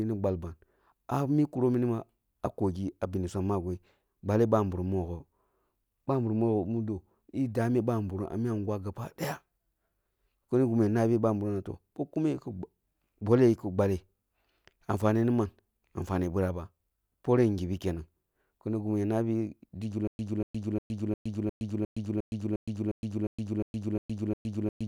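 A speech recording that, from 20.07 s, just after "kini gimi ya nabi", locks into a stutter with silent gaps until the end: a 0.24 s fragment replays about 13 times, each followed by roughly 0.12 s of dead digital silence, so the burst returns every 0.36 s at a steady pace. The likely cause is a stalled player or stream that repeated its last buffered chunk at each retry and then ran dry, losing the audio that should have played.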